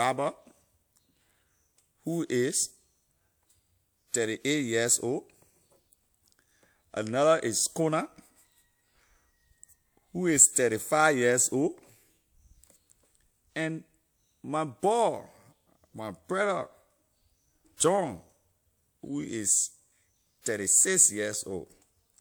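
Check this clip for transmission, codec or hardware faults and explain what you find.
There's one codec fault. Pre-echo at 17.77 to 17.80 s: a short hiss runs about 30 ms ahead of a sharp onset, because block-spread quantisation noise leaks before the attack and softens it.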